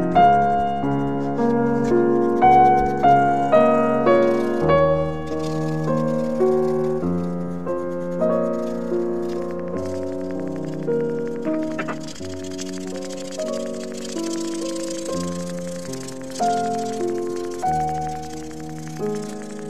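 From 9.33 s to 19.6 s there's a train of clicks, about a hundred of them at a steady 11.3 per second, peaking roughly level with the sound itself. It ticks right through the pauses too, likely interference from nearby gear or a faulty connection.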